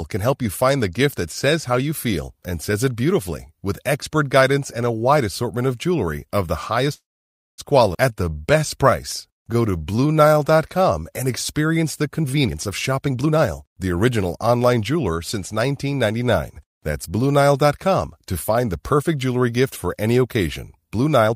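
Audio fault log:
6.93–7.60 s, call audio freeze: Right after "of jewelry of the", the sound stops advancing. The likely cause is packets held up in transit until the jitter buffer ran dry. The receiver carries the last sound on as a brief fading tail, then about 560 ms of silence, filling 645 ms in all. When delivery resumes, the speech picks up exactly where it stopped, so nothing is lost. A gap has been inserted, and playback now runs 645 ms later.
7.94–7.96 s, skip ahead: Just after the freeze, the receiver discards a backlog of audio that was already waiting. This is roughly 300 ms of speech, thrown away to recover some of the delay. Playback lurches forward with only a tiny 4 ms bridge. The sounds on either side of the jump are butted almost directly together, so part of the speech is simply missing.
8.09–11.00 s, jitter buffer slow-down: With its reserve still low, the jitter buffer rebuilds it by repeating single pitch periods and slivers of pauses over and over. 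This adds 295 ms across the stretch leading into "and experience the". The speech plays at 90% of normal speed while its pitch stays the same. Sounds come out drawn out and slightly sluggish.
12.23–13.42 s and 21.27–21.34 s, jitter buffer speed-up: The buffer now holds more audio than its target, so the receiver cuts short pieces of one or a few pitch periods in quick succession. After "and experience the", roughly 400 ms is removed and speech runs at 134% speed until "the original online jeweler", sounding hurried at unchanged pitch. At the very end, roughly 70 ms is trimmed at 205% speed, a brief rushed squeeze.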